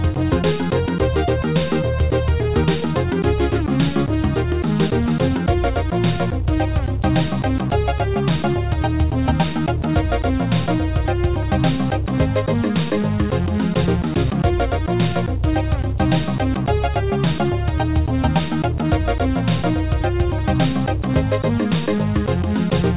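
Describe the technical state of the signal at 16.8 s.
At 16.8 s the signal is intact, with no fault, only the expected narrowband character of the WebRTC call path, which carries nothing above 4 kHz.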